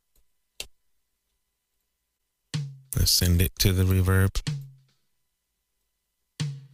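No technical faults can be heard in this recording.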